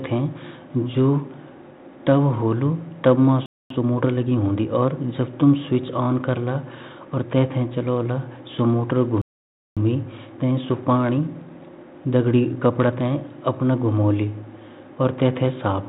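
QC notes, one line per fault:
3.46–3.70 s and 9.22–9.77 s, playback stall: the speech cuts to silence mid-flow for about 0.24 s, then about 0.55 s, before resuming where it stopped, likely because the player's buffer ran dry or its thread was blocked. Waveform shows flat silent gaps; spectrogram shows blank vertical bands.
3.70–4.66 s and 9.77–12.77 s, time-compressed catch-up: after each stall the speech runs hurried at unchanged pitch, about 1.25× then 1.1×, as small slices are dropped and cross-faded to clear the backlog. Spectrogram shows syllables packed closer with harmonics at normal height.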